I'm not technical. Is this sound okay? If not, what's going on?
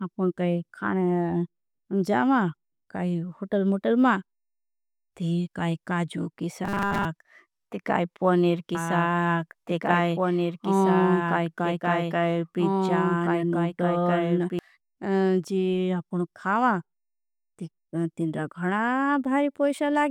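No, there are two problems. First, there's a robotic sound from repeated short buffers between 6.65 and 7.05 s, right after "काई काजू की". For that split second the speech turns into a stiff, metallic buzz. The likely cause is that new audio wasn't arriving fast enough, so the software kept replaying a tiny 5 ms slice of what it already had, skipping most of the real sound. Repeating a 5 ms slice over and over creates a steady 200 Hz hum that sits on top of the voice.

Second, there's a doubled audio track from 8.75 to 14.59 s, starting just after "ती काई पनेर". A second copy of the same speech plays along about two seconds behind the original, a bit quieter, so you hear things said twice and overlapping. It likely comes from the audio being picked up a second time through a slower route, or from an edit that left two copies out of step. It switches on and off suddenly, with no roomy, echoey tail.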